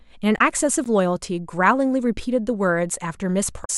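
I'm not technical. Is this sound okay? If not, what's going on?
No. There are two kinds of problem in this speech clip.

The first is damaged data in a compressed stream, heard at 0.35 to 0.41 s and again at 3.61 to 3.70 s. Part of the stored file was corrupted at those points, so the player couldn't read that stretch properly. It loses its place and searches for the next readable chunk. Each time, this comes out as a brief glitch, such as a chirp, squawk, click or short hole, lasting under a tenth of a second.

The second is a block of digital silence at 0.84 s. For about 15 milliseconds the sound is replaced by complete silence. That's the kind of gap left when the playback software doesn't deliver the next piece of audio in time. Because the sound stops and restarts abruptly, with no fade, the gap is heard as a small tick or pop rather than as a pause.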